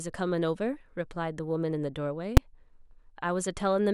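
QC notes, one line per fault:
2.37 s, invalid numbers at full scale: a calculation in the processing chain produced infinite or invalid values, which were pinned to the largest positive or negative value for a block of about 5 ms. The block is this short, so the speech is broken by a single sharp bang.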